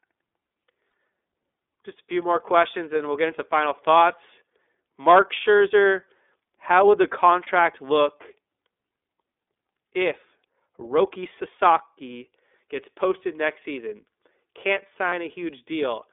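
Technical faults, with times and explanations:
Throughout, iLBC codec: the speech sits in a narrow telephone band from about 300 Hz to 3.6 kHz, so it sounds thin and boxed-in. There is a plainly audible rough, slightly synthetic edge because each block is coded on its own from a modelled excitation rather than the real waveform. The block timing fits the 13.33 kbps mode with 30 ms frames.
0.91 s, 7.43–7.48 s (just after "how would the") and 15.09–15.13 s, lost iLBC frames: one 30 ms frame drops out each time. The decoder fills each gap by repeating the last pitch cycle with some added noise, so a brief held, faintly buzzy sound replaces the missing piece. Because iLBC frames are independent, normal speech returns right after each gap.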